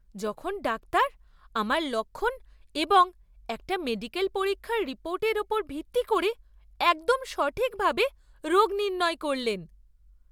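From the first moment to the end, the speech carries a low buzz at about 46.9 Hz, the signature of a block size mismatch (truncated). One stage is handing over longer blocks than the next one takes in, so the tail of every block gets dropped. That regular chop at the block boundary is the buzz, and its rate fits blocks of 1024 samples. The pacing still sounds normal, with no audible speed-up.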